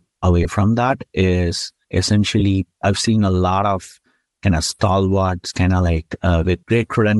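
Speech runs through the whole clip with a breathy, grainy texture. The upper spectrum sounds thinned and filled with hiss rather than real detail. This is plainly audible codec damage, likely from Bluetooth LC3 compression at a moderate rate, with a character that fits roughly 48 kbps and 7.5 ms transform frames. On a spectrogram the high band above a few kHz looks patchy and noise-textured, and it lacks the clean harmonic striations seen lower down. Three brief dropouts of lost LE Audio frames occur at 0.43–0.46 s, 2.40–2.42 s and 5.49–5.51 s. Each lasts about 15 ms, which is consistent with two consecutive 7.5 ms frames going missing. In each gap the decoder repeats the previous spectrum with scrambled phase, so the sound turns into a short, smeared, noisy blip instead of a clean cut. The waveform shows a small burst of incoherent, noise-like signal at those points, and on the spectrogram each appears as a narrow vertical smudge where the harmonics break up.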